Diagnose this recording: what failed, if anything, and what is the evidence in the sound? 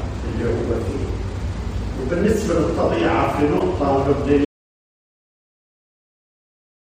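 Codec stage first: there's a corrupt frame decoded at 3.59 to 3.62 s, a short chirpy blip. Flipped bits in roughly two compressed frames got played anyway, so misread gains and codes threw energy into the wrong frequencies for just that span.

Then at 4.45 s the sound cuts off into dead silence and stays that way to the end, with no room tone at all. That's an audio dropout to silence, likely an input or link loss upstream while the recorder kept writing silence.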